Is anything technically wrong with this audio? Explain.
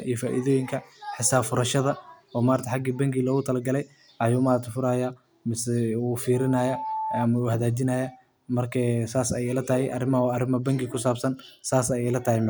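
Yes. From 6.33 to 7.27 s, just before "hagaajinaya marka saas ayeey", there is loudspeaker feedback squeal. The microphone re-amplifies its own loudspeaker, so an 873 Hz tone swells within a second to about speech level.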